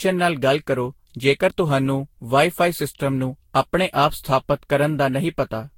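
Generation loss throughout, likely from about seven Vorbis re-encodes near 62 kbit/s, leaves the speech swirly, hollow and smeared, with blurred attacks and nothing above 16.6 kHz.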